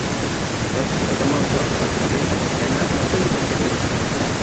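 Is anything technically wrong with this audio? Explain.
Yes: echo with no canceller runs through the whole speech clip. The far end plays the call over a loudspeaker, its microphone captures it, and nothing subtracts it, so each phrase returns after roughly a third of a second, about 11 dB quieter and thinner. Unlike room reverberation, which smears into a continuous tail, this is a distinct delayed copy that trails the talker. The call path also cuts off everything above 8 kHz.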